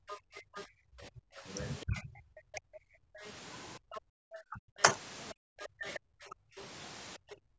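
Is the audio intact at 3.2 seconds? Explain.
No. At 3.2 seconds the speech is suppressed in double talk. The fault spans the whole clip, from 0 to 7.59 s, affecting roughly 5 s in total, and at its deepest falls roughly 40 dB. The likely cause is an echo canceller that could not separate the talker from loudspeaker echo while both sides spoke, so it turned both down.

The other side's voice is also leaking through, from 3.18 to 6.62 s. A second voice sits about 15 dB below the talker. It likely comes from a loudspeaker echo that the canceller failed to remove from the microphone.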